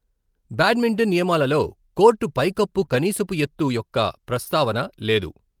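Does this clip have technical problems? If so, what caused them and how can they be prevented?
Yes. Around 2.81 to 2.83 s, and again from 2.89 to 2.95 s, there's a lost packet rebuilt from error correction. The sound doesn't drop out, but it turns rougher and noisier for those stretches. What happened is that packets went missing, and the following packet carried a low-bitrate backup copy that the decoder played in their place. The first patch lasts 20 ms, which fits one packet; the second runs 40 ms, which fits two packets. Prevention: fix the network path's loss and jitter, and keep in-band FEC switched on so that anything still lost gets covered this way.

Between those two, from 2.85 to 2.89 s, there's a short concealed packet loss. About 20 ms never arrived in time, and with no backup copy available the receiver improvised for roughly 14 ms of it by extending the preceding sound, then crossfaded back into the real signal. 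You hear it as a quick smear or wobble sitting in the middle of that cluster, and any short consonant there could get swallowed. Prevention: reduce packet loss on the link, and give the jitter buffer a little more depth so late packets still make it in.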